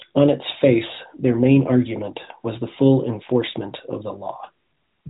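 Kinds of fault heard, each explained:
No faults detected in this speech recording.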